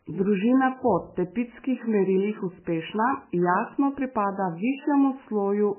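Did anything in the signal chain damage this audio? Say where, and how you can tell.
Yes. The damage sits at the codec stage and runs through the whole speech clip. Nothing survives above 3 kHz, so the treble is sliced off at a fixed point. Weak detail flickers in and out, giving a watery, swirly texture. S sounds turn metallic and chirpy, and consonant attacks smear. This is likely MP3 compression at a very low bitrate, near 10 kbps. Starved of bits, the encoder dropped the top band and zeroed quiet frequency lines frame by frame.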